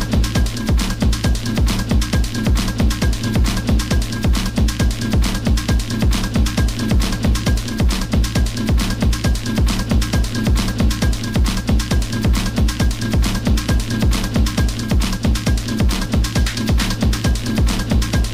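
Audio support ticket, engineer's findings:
No faults found on this one; nothing stood out anywhere in the recording, so there's nothing to chase here.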